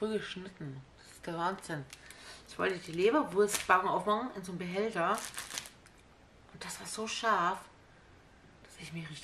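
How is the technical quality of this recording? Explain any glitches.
No glitches or technical faults can be heard anywhere in the recording; the signal stays intact and continuous throughout.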